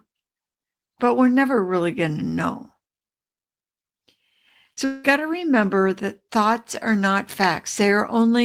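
At 4.73 s, roughly 40 ms of the speech stream failed to reach the decoder in time, a short concealed packet loss. The receiver covered the gap by extending the preceding sound for about 34 ms, carrying its pitch forward where it was voiced and substituting shaped noise where it was not, before crossfading back into the real signal by 4.79 s. The result is a brief smear or wobble, and a quick consonant in that spot can disappear.

Shortly after, from 4.85 to 5.06 s, the audio breaks off for about 200 ms before resuming further on, with that stretch of speech simply gone. The likely cause is a long network dropout, where nothing arrived and the receiver kept extending the last sound. Here about 190 ms of that is filled with a fading buzz or hiss and there is no true silence, so the gap sounds like a smeared, decaying tone rather than a clean cut.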